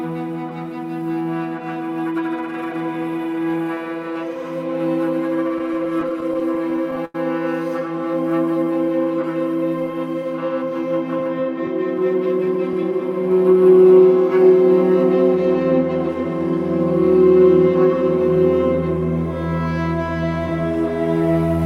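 Between 5.58 and 7.15 s, packets kept reaching the receiver late, so its jitter buffer ran dry fifteen separate times. Each time it filled the hole by carrying the last sound forward, about 229 ms of stand-in audio in all, with the longest single wait around 90 ms. Nothing is actually lost, but roughly 15% of that stretch is filler, so the sound drags and stutters: the repeated stalls of a starved buffer.

From 7.92 to 9.18 s comes a jitter buffer slow-down. With the buffer low, the receiver builds a reserve by repeating single pitch periods or slivers of pauses over and over. That inserts about 77 ms and brings playback to 94% of normal speed. The pitch holds steady, but sounds are drawn out and the passage feels slightly sluggish.

Between 11.20 and 13.20 s the opposite happens in a jitter buffer speed-up. The buffer now holds more audio than its target, so the receiver trims short pieces one or a few pitch periods long, again and again, shedding about a tenth of a second. 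Playback runs at 105% of normal speed with the pitch unchanged, and the passage comes across as slightly hurried.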